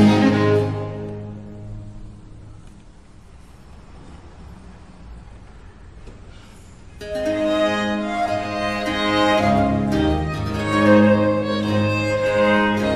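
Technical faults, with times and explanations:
No technical faults are audible anywhere in the recording.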